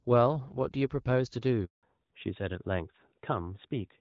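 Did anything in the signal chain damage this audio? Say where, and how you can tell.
Yes. At the network stage there is a handover gap from 1.65 to 1.83 s: the speech decays within a few tens of milliseconds and 180 ms of silence follows, because no speech frames reached the decoder while the call switched links.

From 1.83 s to the end, a fallback to narrowband in the codec stage removes everything above 4 kHz, so the speech turns duller and rougher than the clear HD Voice before the gap. That fits a switch from AMR-WB at around 12.65 kbit/s to AMR-NB at 12.2 kbit/s.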